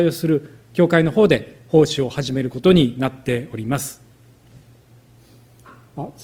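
At about 1.03 s the quality drops suddenly and stays down to the end, with no gap or dropout at the switch. That's an adaptive stream at a lower bitrate: the connection slowed, so the player moved to a leaner version of the stream. Codec artefacts become more obvious. It sounds like a step from roughly 64 kbit/s Opus down to around 24 kbit/s.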